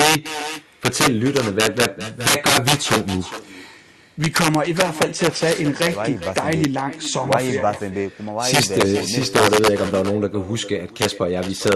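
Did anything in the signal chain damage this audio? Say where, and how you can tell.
Yes. Loud peaks throughout break into violent cracks, harsher than clipping. That is integer overflow at the sample-format conversion stage: gain about 13 dB too high pushed a small share of samples past full scale, wrapping them to the opposite sign.

Every phrase returns roughly 400 ms later as a thinner copy about 14 dB down. That is echo with no canceller at the call-processing stage, where the far-end loudspeaker feeds back into its microphone unremoved.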